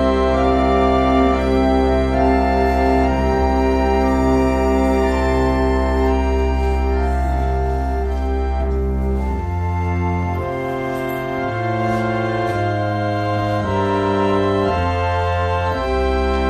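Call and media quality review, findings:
No audible transport or processing faults observed across the recording; signal level, continuity and timing hold steady throughout.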